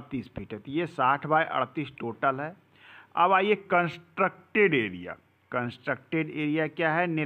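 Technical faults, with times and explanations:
3.57 to 5.66 s, drift correction step: here the whole sound drops about 6% in speed and sinks by roughly a semitone (106 cents flat) all at once, and holds there for about two seconds. Pitch and tempo move together, so it comes across as a tape-slowdown detune rather than a filter change. That's likely a clock-matching resampler changing its rate in one step to rebalance its buffer, then releasing.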